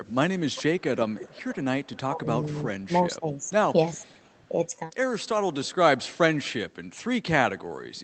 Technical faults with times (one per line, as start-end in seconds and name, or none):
0.10-2.85 echo leak
2.09-2.26 speech suppressed in double talk
2.86-4.59 speech suppressed in double talk
3.44-4.42 echo leak